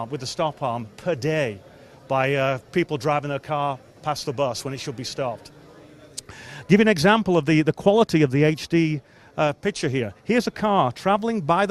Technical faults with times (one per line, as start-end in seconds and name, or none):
none